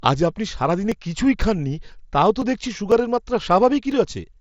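Right after "আজ আপনি সারাদিনে", from 0.92 s to 3.92 s, there are periodic USB or driver dropouts: a tick roughly every 0.5 s, around seven in all. Something stalls the driver on a timer, and about a millisecond of speech is skipped each time.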